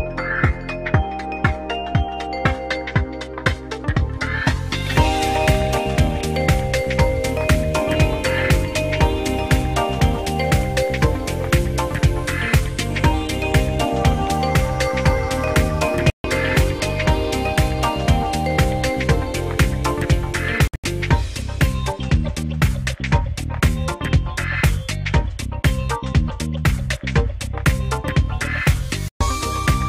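At 16.1 s the audio cuts to silence for about 142 ms, then resumes as though it had kept playing underneath. At 20.68 s a similar amount goes missing, broken into gaps spread over about 160 ms, the longest near 81 ms. A final hole of about 122 ms opens at 29.08 s. This is likely Bluetooth dropout: packets missed their deadline at the headphones and were discarded, leaving silence until the stream caught up.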